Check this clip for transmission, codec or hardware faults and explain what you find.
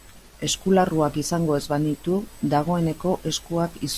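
Nothing here points to a transmission, codec or hardware problem; the speech comes through with no faults to report.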